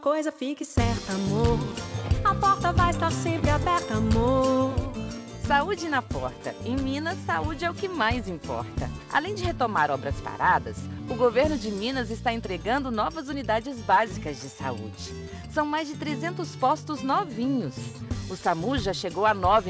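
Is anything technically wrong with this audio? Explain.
No, nothing is wrong: the audio arrives over a call path with its band ending at 8 kHz, consistent with a wideband codec such as G.722, and shows no faults.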